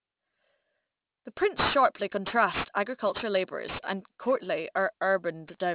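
Aliasing runs throughout: the speech was resampled down without filtering, consistent with a 48 kHz to 8 kHz drop, so content above 4 kHz folds back roughly 10 dB below the signal. Sibilants sound gritty and metallic. A spectrogram shows energy crowding a hard 4 kHz ceiling, with mirrored, unrelated traces.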